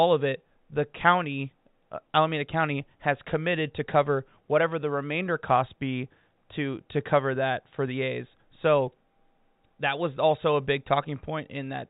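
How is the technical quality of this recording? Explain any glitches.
No glitches are audible anywhere in this speech recording.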